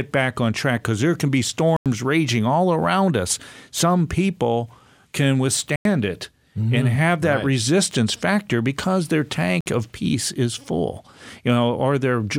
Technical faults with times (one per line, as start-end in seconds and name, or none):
1.76-1.86 block of digital silence
5.76-5.85 block of digital silence
9.61-9.66 block of digital silence